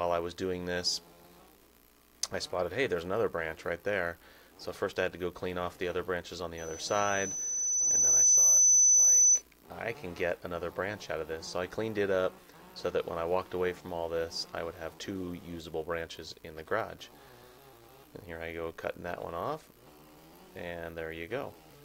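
A microphone picking up its own loudspeaker causes loudspeaker feedback squeal: a 6 kHz tone swells over about two seconds, 6.57 to 9.42 s, towering over the audio.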